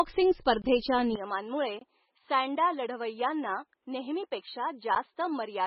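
Throughout, the speech sounds watery and swirly, with smeared consonant attacks and no treble above 5.5 kHz. This is likely heavy MP3 compression at a very low bitrate, around 16 kbps. Short of bits, the encoder cuts the top band and drops weak frequency lines that flicker from frame to frame.

From 0.62 to 0.64 s the sound cuts out abruptly, leaving a tiny hole of about 21 ms. It is a block of digital silence: samples replaced by zeros, which fits a 1024-sample output buffer not being filled in time, with hard edges at both ends.

From 1.16 s to the end, the speech abruptly turns duller and boxier, with nothing above 4.5 kHz. It drops roughly 10 dB in level and gains a faint new background noise well below the speech. There is no gap at the change, most likely an input switched to a poorer device with a narrower band and its own tone and noise.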